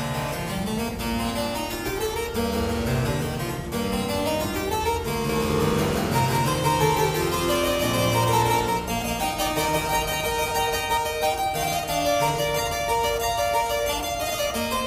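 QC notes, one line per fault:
5.29–10.97 s, doubled audio track: a full-band copy trails roughly 200 ms behind at about equal level, with no decay or room colour, starting and stopping abruptly. It is likely the same signal captured twice over a slower path, or two out-of-step copies left in an edit.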